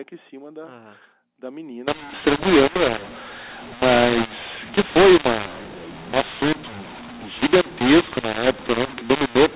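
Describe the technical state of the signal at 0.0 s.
At 0.0 s the speech signal is intact, with no fault present, and it carries the normal character of mu-law telephone coding at 8 kHz, whose band stops at 4 kHz.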